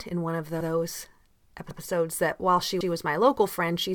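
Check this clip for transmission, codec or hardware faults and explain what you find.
Overlapping chunks appear twice. The audio was handled in 1.0 s blocks, each starting 100 ms before the previous one finished. That 100 ms of audio plays again at each join: at 1.71 s, just before "that while she was", and at 2.81 s, between "that while she" and "was my". Each join is heard as a short stutter.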